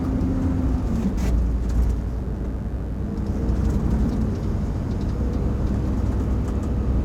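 Mains buzz runs from start to finish beneath these sounds, roughly 30 dB down. Sharp switching spikes, twice per 50 Hz cycle, spread harmonics into the kilohertz range, so it sounds raspy and edgy rather than like a smooth, low 50 Hz hum.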